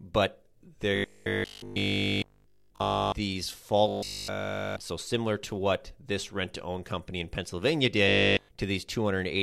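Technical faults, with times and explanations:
0.96–3.14 s, 3.88–4.80 s and 8.09–8.49 s: robotic sound from repeated short buffers. New audio likely arrived too seldom, so a 20 ms fragment was looped over and over, giving a rigid metallic 50 Hz buzz throughout each stretch.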